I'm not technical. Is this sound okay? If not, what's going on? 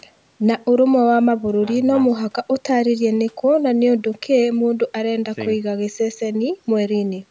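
Yes, this speech recording is fine: it has just gone through the usual microphone processing of a call, which trims away the very deepest bass as it normally does, and nothing is wrong with it.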